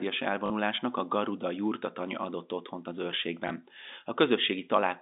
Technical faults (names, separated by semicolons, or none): packet loss with last packet repeated